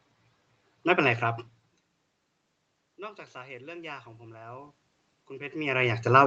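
From 2.96 s to the end, the automatic gain control is rising: after the input dropped by about 22 dB, it judged the level too quiet and pushed its gain up gradually, so the speech and the room noise behind it swell together.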